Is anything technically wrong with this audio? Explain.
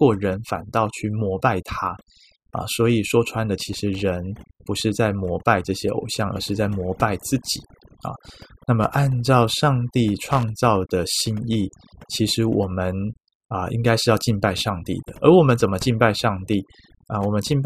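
Yes. Overdone noise removal runs through the whole speech clip. The noise reduction was set so aggressively that any frequency band sitting near its noise estimate is pulled far down or shut off, and the softer parts of the voice are cut along with the noise. The background drops to near silence with twinkling specks. On a spectrogram the quiet regions look blank except for scattered isolated dots, and the voice's harmonics look patchy and broken. In the waveform the pauses sit almost flat.

Loose connector crackle appears from 10.32 to 10.43 s, a burst of a little over 100 ms. A worn or dirty contact is rapidly making and breaking, so the signal is chopped on and off, and any DC on the line turns each break into a pop. It sounds like a short, irregular scratchy crackle. The waveform shows jagged spikes and dropouts in that window, and the spectrogram shows thin vertical broadband streaks.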